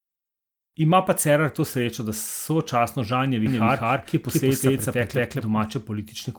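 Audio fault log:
3.46–5.64 s, doubled audio track: the speech is heard twice, with a second full-band copy trailing the first by around 200 ms and at roughly the same loudness, so every syllable gets a clean repeat with no decay or room colour. The copy cuts in and out abruptly at those edges. This likely comes from the signal being captured a second time through a slower path, or an edit leaving two copies out of step.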